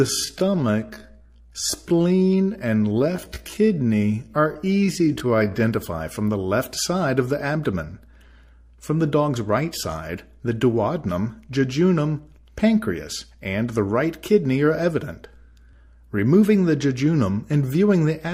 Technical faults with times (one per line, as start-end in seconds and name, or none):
0.00-5.60 time-stretched section